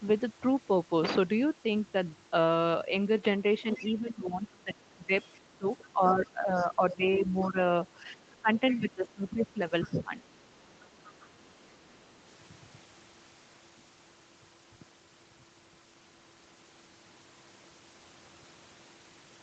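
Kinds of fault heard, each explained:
Speech suppressed in double talk: The talker's voice sinks in two stretches, about 3.6 to 7.6 s and 8.2 to 10.2 s, dipping roughly 10 dB and then closer to 15 dB, likely because the echo canceller couldn't split the talker from the other side and ducked both.
Other side's voice leaking through: A faint second voice sneaks in, well below the talker, at 3.72–3.87, 6.9–7.49, 8.31–8.9, 9.86–9.9 and 10.73–11.26 s, likely loudspeaker playback the echo canceller didn't fully scrub out of the microphone signal.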